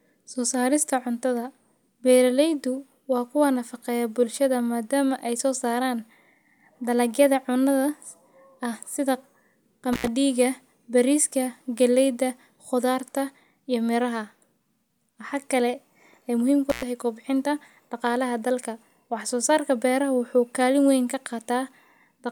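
At 9.93 and 16.70 s, an intermittent contact drops the speech for about 79 and 100 ms, crackling at each edge; waveforms show near-flat gaps bracketed by spikes, spectrograms vertical click lines.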